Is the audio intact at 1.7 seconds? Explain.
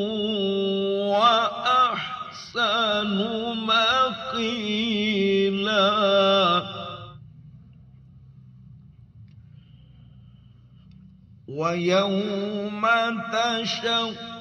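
Yes, at 1.7 seconds the audio runs continuously, with no dropout, click, distortion or other fault.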